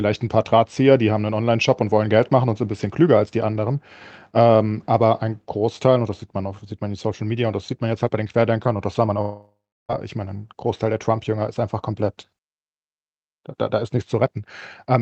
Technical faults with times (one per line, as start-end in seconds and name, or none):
9.21-9.91 long network dropout